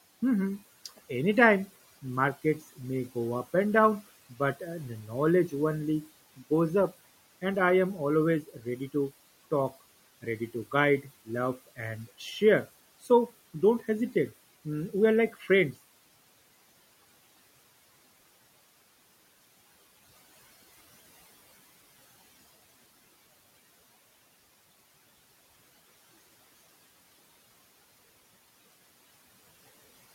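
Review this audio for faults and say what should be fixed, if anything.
Speech cut by the noise suppressor at 8.43 to 8.66 s, after "I am" and before "ready to talk ready": the suppressor treated speech as noise, dipping it about 9 dB for around a tenth of a second. Lowering the suppression strength or slowing its release would keep quiet speech from being pulled down with the room noise, which sits about 22 dB below the speech.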